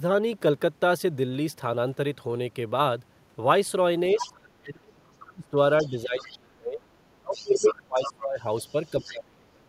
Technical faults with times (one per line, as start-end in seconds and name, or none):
4.17-9.64 speech suppressed in double talk
4.18-4.30 other side's voice leaking through
5.78-6.35 other side's voice leaking through
7.34-8.12 other side's voice leaking through
8.67-9.11 other side's voice leaking through